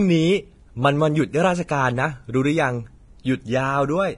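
Across the whole recording the speech sounds hissy and grainy, with a roughened edge on voiced tones and softened attacks on consonants, and nothing is heard above about 10.6 kHz. The likely cause is heavy Vorbis compression at a low setting, which fits a bitrate near 30 kbps. The codec has lowered its cut-off and quantised the remaining treble so coarsely that fine detail has turned into noise-like grain of similar energy.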